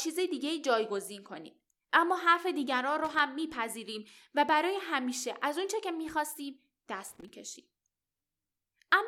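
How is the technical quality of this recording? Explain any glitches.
Two short bursts of loose connector crackle break into this speech recording. The first runs from 3.04 to 3.20 s and the second from 7.08 to 7.29 s. Each is an irregular, scratchy crackle, lasting about 0.15 s and 0.21 s respectively. A worn or dirty contact somewhere in the cable or plug path is making and breaking as it shifts. That chops the signal on and off in rapid, uneven bursts, and any DC present on the line adds pops with each break.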